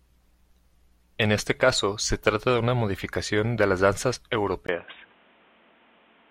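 At 4.67 s the speech turns abruptly dull and boxy after a brief 20 ms gap, with nothing above 3.8 kHz and a faint new background hiss, at much the same level. The input likely switched to a poorer device, which lasts to the end.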